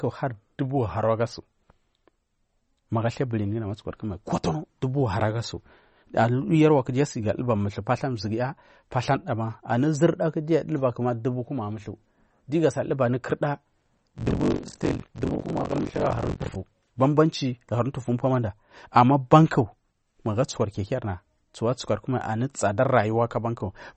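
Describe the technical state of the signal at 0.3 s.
At 0.3 s the signal is caught in damage that runs through the whole clip, most likely MP3 compression at a low bitrate, one that fits roughly 34 kbps. Starved of bits, the encoder drops weak frequency lines, which flicker on and off from frame to frame, and it removes everything above 8.4 kHz. The speech therefore sounds plainly watery and swirly, dull at the top, with metallic chirps on s sounds and smeared attacks.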